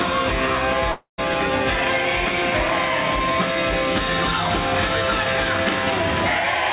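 From 0.92 to 1.20 s the sound cuts out. The last moment is drawn out as a buzzing tail that fades into about 130 ms of silence. Audio returns with about 260 ms lost. This is likely a long network dropout. Nothing reaches above 4 kHz, which fits a G.711 call path.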